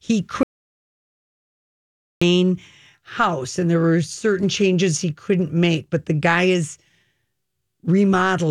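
Speech recording with an audio dropout to silence from 0.43 s to 2.22 s. The signal cuts off abruptly, and for about 1.78 s the track holds silence, with no room tone or noise floor beneath it, before the speech resumes mid-flow. The complete absence of background points to the input having been lost rather than merely quieted, most likely through a disconnected device, a failed link or an accidental mute while the recorder kept writing silence. Whatever was spoken in that span is unrecoverable.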